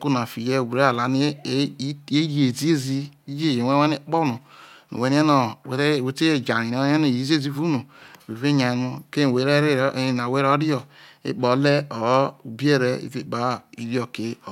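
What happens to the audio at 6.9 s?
Nothing goes wrong at 6.9 s: the speech carries on intact through that moment, with no dropout, click, glitch or other fault.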